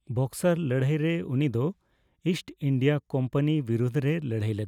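A speech recording with nothing technically wrong with it.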